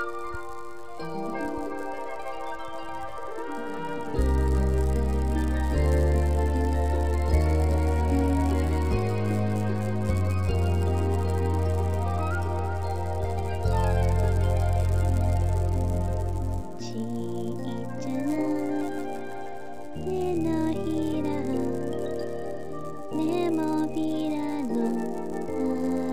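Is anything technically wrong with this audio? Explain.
Yes. A resampler restarted on every block runs throughout: each 10 ms block was converted on its own, so its edges lacked real neighbouring samples. The resulting edge errors repeat at 100 Hz, heard as a buzz that sounds only while signal is present.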